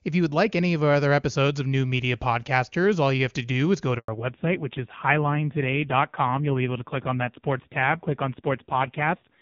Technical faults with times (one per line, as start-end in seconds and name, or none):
3.98-4.08 handover gap
4.08-9.42 fallback to narrowband